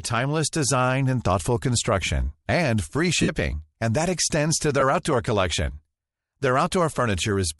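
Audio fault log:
Throughout, Bluetooth LC3 compression: the speech carries a breathy, grainy edge that's plainly audible, and the top end sounds thinned out and partly replaced by hiss. That's likely the LE Audio codec working in short 7.5 ms frames, where each frame's upper spectrum gets zeroed and then filled with noise to hide the gap. The damage sounds like a modest bitrate, something around 48 kbps would fit.
3.22 to 3.30 s and 4.80 to 4.83 s, lost LE Audio frames: the first gap comes right after "thoughtful construction and free" and lasts about 60 ms. The sound smears into a noisy blur and then sinks, because the decoder keeps replaying the last good spectrum with random signs and fades it as the loss drags on. The second, shorter one, about 22 ms before "outdoor collection", is just a brief rough smudge.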